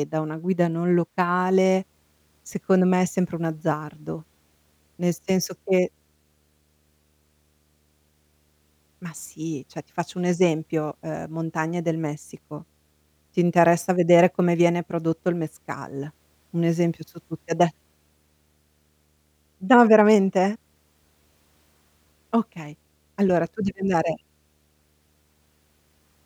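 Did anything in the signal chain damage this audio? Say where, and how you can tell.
Yes. Video or display buzz enters at the analogue wiring stage. From 1.39 s to the end, a faint 75 Hz buzz with hash sits roughly 45 dB below the speech: a display's field-rate pulses couple into the cable. A spectrogram shows steady lines at 75 Hz and its harmonics.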